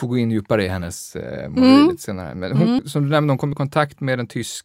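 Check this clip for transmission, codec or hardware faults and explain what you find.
Three short jumps in the speech point to dropped buffers.

Dropped buffer (overrun), at 0.81 s, 2.79 s and 3.53 s: likely the capture side missed collecting samples before they were overwritten, so roughly 20 ms, 70 ms and 20 ms vanish. Each splice skips ahead, with the longer gap at 2.79 s.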